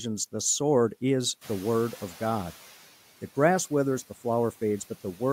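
Just after "the sword is", the room noise jumps by about 14 dB, and from 1.41 to 2.76 s the noise suppressor is catching up, passing the new noise with little reduction before it sinks by about 8 dB over 1.35 s. That gradual fade, rather than an abrupt gate-like drop, sets it apart.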